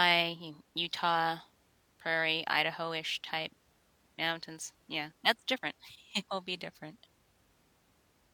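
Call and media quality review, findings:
No faults found in the speech signal on review; nothing audible in level, continuity or bandwidth calls for follow-up on this call segment.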